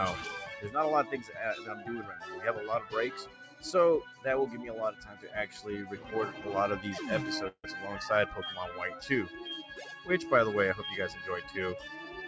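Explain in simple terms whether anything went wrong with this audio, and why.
Yes, a few things went wrong. A noise suppressor applied to music or sounds stayed on for the whole clip. It was built for speech, so it treats held tones and fading tails as noise. It keeps turning them down, and the level swings up and down.

The clearest cases of sound cut by the noise suppressor are at 1.21–1.38, 1.59–1.88, 3.22–3.64, 4.07–4.25, 4.92–5.59 and 5.93–6.11 seconds. In each one, the steady or fading part sinks. Sudden sounds still get through.

At 7.48 seconds there is a call audio freeze lasting about 0.16 seconds. The last bit of sound is stretched into a short fading buzz or hiss, then there is a brief moment of silence. The sound then picks up exactly where it stopped, so nothing is lost. It is simply delayed. The likely cause is that audio packets arrived late and the receiver's buffer ran empty.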